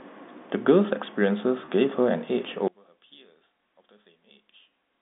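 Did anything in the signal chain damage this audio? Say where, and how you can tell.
Yes. At the network stage, packet loss with pitch repetition at 1.65 to 1.68 s: a 30 ms gap, fitting one lost packet, is filled by repeating the last pitch period, giving a brief held buzz.

From 2.68 s to the end, the speech drops about 27 dB. This is likely one channel inverted in the wiring, cancelling centred sound in mono.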